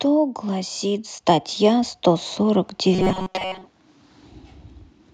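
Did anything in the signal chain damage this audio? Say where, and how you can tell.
Yes. The call processing stage shows automatic gain rising from 0.45 to 2.69 s. Speech and background swell together by about 6 dB over those two seconds or so, which is the AGC deciding the input was too quiet and ramping its gain up.

From 2.94 to 3.66 s there's a robotic sound from repeated short buffers, a stiff metallic buzz at 188 Hz that still tracks the speech. That pitch matches a chunk of about 5.3 ms looping. The cause is likely driver or buffer starvation, with most of the real audio there replaced by repeats.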